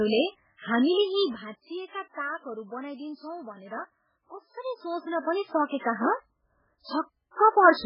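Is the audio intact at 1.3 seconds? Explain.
No. Zipper noise runs from 0.84 to 1.72 s. The level falls by roughly 15 dB in coarse 1 dB steps, about 30 per second, with no smoothing between them. Each jump leaves a small click, so a fast ticking rides on the sound as it fades.

MP3 compression also affects this moment, as it does the whole clip. Nothing is left above 5.2 kHz, and the sound is watery and swirly with smeared attacks. The likely cause is a very low bitrate, around 8 kbps, which leaves the encoder too few bits to keep the treble and weaker detail.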